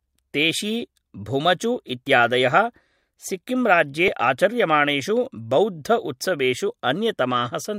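Speech clip in which an overlap between stream segments, roughly every 2 s, makes the player trim audio that was never duplicated. About 16 ms vanishes at 2.07 s after "तेशी भुमचु" and about 6 ms at 4.08 s after "सिक्किम् राज्ये", each heard as a tiny skip.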